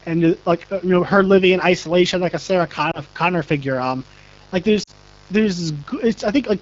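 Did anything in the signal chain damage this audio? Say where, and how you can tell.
Yes. Mains buzz, in the analogue wiring, runs through the whole clip as a steady raspy hum built on 50 Hz, roughly 25 dB below the speech. Its sharp edge comes from switching spikes, from a dimmer, rectifier or an unshielded cable, arriving twice per mains cycle. Those spikes carry harmonics of 50 Hz well up into the kilohertz range, so this is a buzz rather than a pure low tone.

The AMR wideband (HD Voice) codec has plainly audible damage throughout. The speech sounds rough and grainy, with a noisy, hissy top band, and that points to one of AMR-WB's lowest modes, which fits 8.85 kbit/s. At this rate the pulse-driven vocal tract model has too few bits to follow the speech closely below 6.4 kHz. Above that, the 6.4 to 7 kHz band is only shaped noise, which gives the artificial sheen.

Lost AMR speech frames appear twice. 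At 2.91 to 3.00 s there is a brief dip and warble, which fits one lost 20 ms frame. At 4.83 to 4.91 s the sound drops to near silence, which fits two consecutive frames, about 40 ms. In each gap, frames corrupted on the radio link failed their checksum, so the decoder repeated the last good pitch and vocal tract settings at falling gain until real frames returned.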